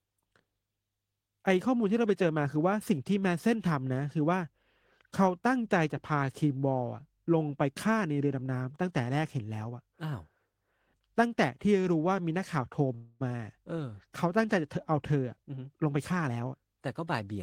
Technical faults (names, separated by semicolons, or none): call audio freeze; jitter buffer speed-up